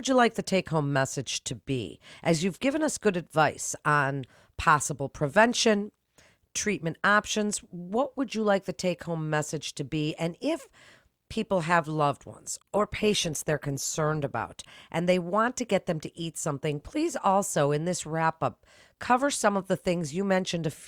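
After "people have loved", from 12.47 to 14.47 s, an adaptive stream at a lower bitrate adds codec artefacts, consistent with Opus falling to about 24 kbit/s. The quality switches abruptly without a gap, unlike a dropout, and recovers before "and they want to".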